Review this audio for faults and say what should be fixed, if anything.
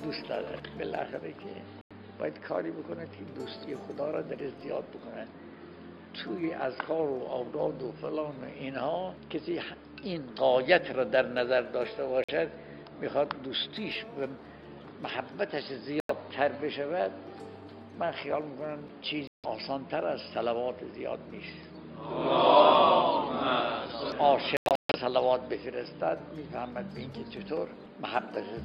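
The audio cuts to silence five times, with the signal resuming further on as though it had kept playing: 1.81 to 1.92 s (93 ms lost), 12.24 to 12.30 s (46 ms), 16.00 to 16.11 s (93 ms), 19.27 to 19.46 s (163 ms), and a broken cluster from 24.57 to 24.96 s losing 279 ms, longest gap 139 ms. This is likely a Bluetooth dropout, with packets arriving too late and being discarded. Prevent it by improving link conditions or raising the receiver's buffer.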